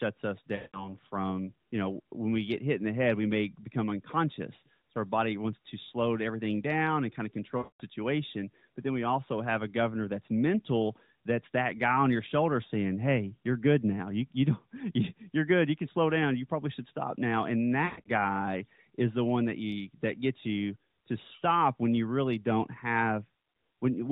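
Lost AMR speech frames break up this speech at 0.56, 7.58 and 17.86 s. Each time, the decoder repeats its last good pitch and vocal-tract settings with falling gain, so about 180 to 220 ms of audio smears and fades. The third dropout is scattered over 200 ms, with a longest run of 120 ms. All of this sits within the 4 kHz band of the AMR narrowband mobile codec.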